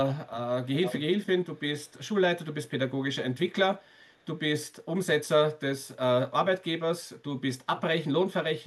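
Echo leak at 0.64 to 0.96 s, fairly strong, then faint scraps at 1.54, 1.85 to 1.94 and 3.81 to 4.26 s: a delayed copy of the speech about 352 ms behind, likely from a far-end loudspeaker whose echo canceller let some through.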